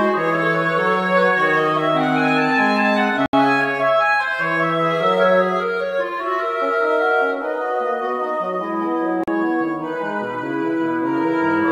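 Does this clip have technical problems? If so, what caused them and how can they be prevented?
Yes. The sound drops to silence for about 72 ms at 3.26 s and 40 ms at 9.24 s, then resumes. These gaps are likely a Bluetooth stall, where interference delayed packets until the headphones' buffer emptied. Keeping the phone close and away from Wi-Fi or other 2.4 GHz sources helps prevent this.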